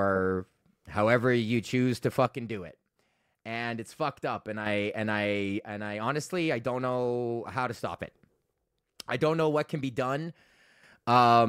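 One stereo channel likely drops out three times in this speech clip, so after the two channels are summed to mono only half the signal remains. The speech falls abruptly by about 6 dB and then jumps back up. The first loss starts after "however you choose to" at 2.26 s and lasts until 4.66 s, just before "and I". The second runs from 5.59 s, following "and I", to 7.99 s, and the third from 8.53 s to 10.83 s.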